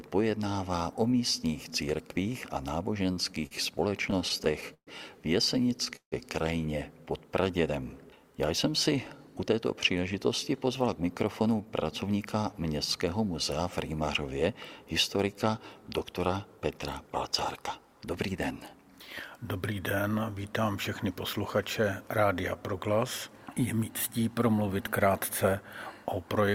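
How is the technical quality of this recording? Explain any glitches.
The recording is marred by network-timing glitches: stuttering, a brief freeze, then two stretches of hurried playback.

Repeated stalls (stutter), 3.03 to 3.53 s and 3.91 to 4.89 s: the sound drags and catches, five times in the first stretch and ten in the second, where the longest hold lasts 130 ms. Packets arrived late, the jitter buffer kept emptying, and the receiver stretched the last sound each time, so nothing is lost.

Call audio freeze, 5.96 to 6.14 s: the sound hangs as a fading continuation and then drops to about 100 ms of silence before resuming where it stopped. This was likely caused by packets held up in transit, adding a 158 ms delay.

Jitter buffer speed-up, 9.18 to 9.54 s at 109% speed and 9.95 to 12.36 s at 108% speed: the audio runs faster and sounds rushed, with its pitch unchanged. The buffer had overfilled, so the receiver trimmed tiny pitch-period slices, about 40 ms and 200 ms in total.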